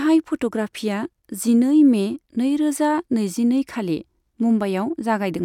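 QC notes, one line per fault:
Nothing jumped out on this listen; it's just a bit of speech with nothing to flag.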